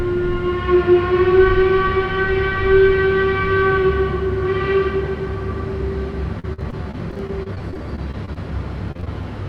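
From 6.39 to 8.38 s, and again from 8.92 to 9.25 s, repeated packet loss makes the sound choppy and robotic. Short gaps, up to 45 ms, are patched by stretching the preceding sound.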